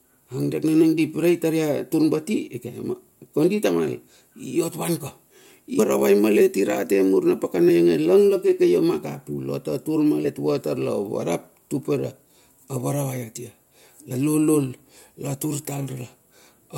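At 5.78, 7.68, 10.24 and 14.10 s, compressed frames are skipped: the speech leaps ahead by multiples of 21.3 ms, and each join is an abrupt jump rather than a silent gap.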